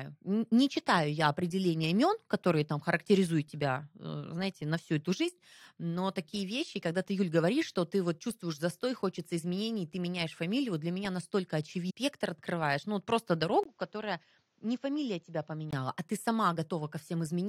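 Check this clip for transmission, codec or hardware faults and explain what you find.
Three faults are present: one runs through the whole clip and two occur in the second half.

From start to finish there is sample clock jitter. The converter's clock wanders by around a microsecond, so each sample is taken slightly off time. The resulting error sits roughly 45 dB below the speech and is heard as a hiss or grain that thickens on loud, bright sounds and disappears in pauses.

At 11.89 to 11.91 s the sound jumps ahead with a small blip, most likely a stream segment skipped. The player failed to load one piece of the stream and carried on with the next, leaving a second or more of the programme missing and an abrupt splice.

From 13.63 to 15.73 s the audio goes through what is likely an input switched to a poorer device. The recording changes to a narrower input, with about 20 ms of silence at the changeover. 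Nothing above 7.6 kHz gets through, so the speech turns dull and boxy. It also drops by roughly 5 dB, and a new noise floor appears about 40 dB below the signal. At 15.73 s the original input returns and the sound clears.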